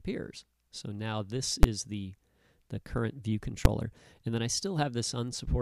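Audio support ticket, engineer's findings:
Invalid numbers at full scale, two hits: 1.63 s (10 ms block) and 3.65 s (5 ms block). Each heard as a single sharp bang. Probable component: DSP stage whose calculation yields infinite/invalid values, clamped to maximum positive or negative output. Waveform: output pinned flat at one extreme value, beyond the audio's peaks, for the whole block. Spectrogram: thin full-band vertical stripe at each time. Check the math for divide-by-zero or overflow.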